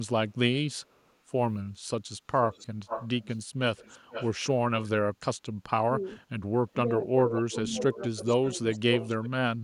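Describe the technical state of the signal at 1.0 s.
The audio at 1.0 s is intact, with no technical fault present at that moment.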